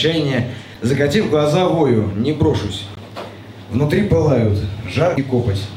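At 0.72 to 0.76 s, 2.94 to 2.98 s and 5.14 to 5.18 s the audio is broken by brief bursts of damaged data in the compressed stream, each lasting about 40 ms. In each place the decoder hits corrupted bytes, misreads the frames there and loses sync until it finds the next valid frame header. Each event sounds like a short chirp, squawk, click or short hole that cuts across the sound before clean playback resumes.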